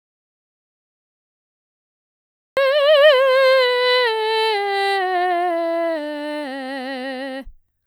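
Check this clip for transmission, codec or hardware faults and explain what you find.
There's one fault here: an audio dropout to silence. The clip opens already dead, with silence from the start through to about 2.57 s, and then the music comes in mid-flow. That gap is silent, with no room tone or hiss underneath, so it's not just a quiet passage. The likely cause is the input dropping out, say a disconnected device, a failed link or a stray mute, while the recorder kept writing empty samples. Whatever was playing during that stretch is simply gone.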